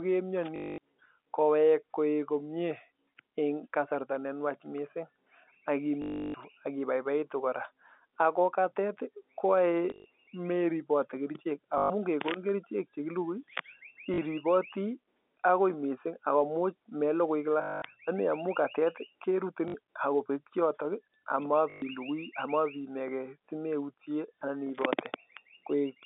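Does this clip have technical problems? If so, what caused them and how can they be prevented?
Yes. The speech breaks into short robotic stutters that buzz at about 50 Hz. This happens at 0.56, 6.02, 9.9, 11.78, 14.14, 17.62, 19.68 and 21.7 s, each lasting 40 to 320 ms, and at 9.9 s the gaps are scattered over 160 ms. The cause is packet loss with the last packet repeated. The receiver replays the final good packet until data resumes, and the buzz fits 20 ms packets. A steadier network path, with a jitter buffer and proper loss concealment, would prevent it.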